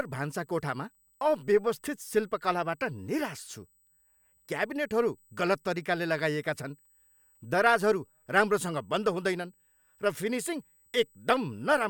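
Running under the speech for the whole clip there's a faint USB whine, a steady tone at 8 kHz whose strongest part sits at its 16 kHz harmonic, roughly 40 dB below the speech. That's the bus's 125-microsecond microframe rhythm leaking in through power or ground.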